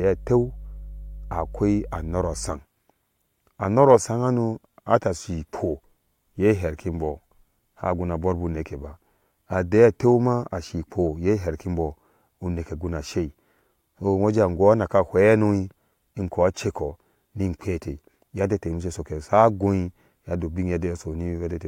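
From the start to 2.53 s, mains hum sits under the speech. It is a steady low tone at 50 Hz, with some low harmonics above it. Its level is fairly strong, only somewhat below the speech itself. Power-line current has leaked into the signal path, through a ground loop or a nearby transformer. The buzz does not waver or change pitch. At 2.53 s it stops.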